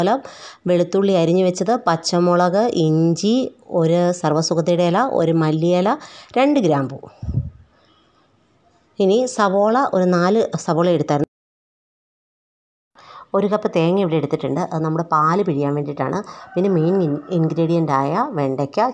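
Nothing is technically wrong with this audio.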